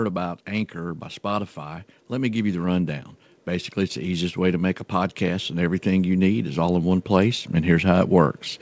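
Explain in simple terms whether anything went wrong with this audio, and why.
The speech and the background around it swell louder together, slowly, from 0.48 to 3.08 seconds and again from 4.91 to 8.41 seconds. That is automatic gain rising: the call's volume control judged the input too quiet and gradually turned everything up.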